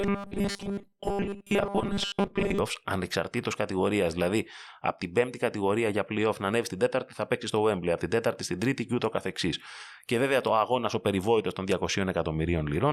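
From 0.01 to 2.59 s the speech has a robotic sound from repeated short buffers: a rigid, metallic 200 Hz buzz loosely following the words. Most of that stretch replays a 5 ms fragment, likely because new audio arrived too slowly.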